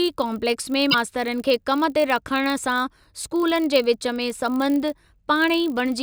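Filter restarted on every block, running for the whole of this speech clip: the filter drops its memory at each block boundary and starts again from silence, so every block opens with a small transient, heard as a 50 Hz buzz that rises and falls with the speech level, which fits blocks of about 20 ms.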